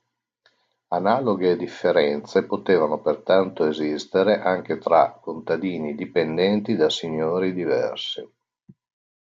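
Speech recording, no technical faults detected.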